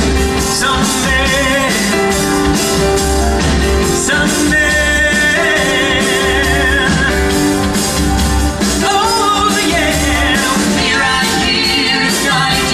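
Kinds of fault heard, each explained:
No technical faults can be heard in this audio.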